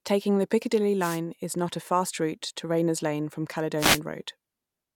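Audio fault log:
0.99–1.20 s and 3.77–4.00 s, wireless microphone noise hit. Two short bursts of static swish over the speech, the first ending just before "is not a fast". The FM radio link faded as reflections cancelled, so receiver noise rose and masked the signal.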